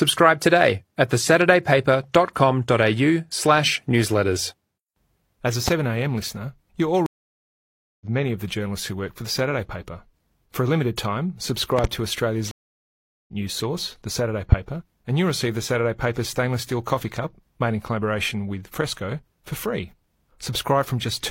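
At 5.68 to 5.70 s, 11.79 to 11.87 s (a double) and 14.52 to 14.55 s, loud pops rise about 15 to 20 dB above the speech. They are likely voltage spikes from switching or static, and the speech carries on underneath them. Stream reconnects at 7.06 to 8.06 s and 12.51 to 13.33 s are different: they leave 945 ms and 767 ms of silence, then the speech resumes about 0.7 s further on, with the skipped material lost.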